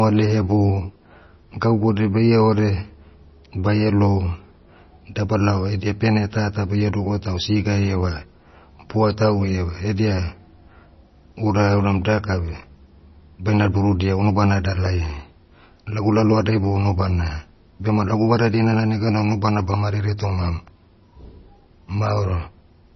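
The speech has likely been through heavy MP3 compression at a very low bitrate, roughly 24 kbps. Short of bits, the encoder cut everything above 5.9 kHz and let weak frequency lines flicker between frames, leaving the speech dull, watery and swirly, with smeared consonant attacks throughout.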